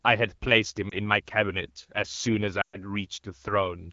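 A brief dip and warble in the speech at 0.90 to 0.95 s, and at 2.61 to 2.77 s a longer stretch where the sound drops quickly to near silence and returns weak and rough, are lost AMR speech frames. The speech is coded in AMR wideband (HD Voice) and stays clear, consistent with about 12.65 kbit/s. Radio errors made frames fail their checks, so the decoder rebuilt each gap from the last good pitch and vocal tract settings with falling gain. The first gap fits a single 20 ms frame, the second about six frames, roughly 120 ms.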